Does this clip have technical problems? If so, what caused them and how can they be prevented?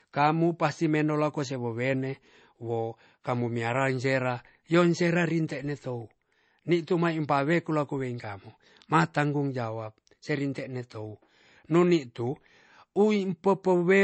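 Yes. The speech is band-limited throughout, with nothing above 8.3 kHz, which fits a very low-bitrate MP3 first pass. It was likely then saved again at a high bitrate, which cannot restore the lost top end. Prevent this by encoding once from the original source at an adequate bitrate.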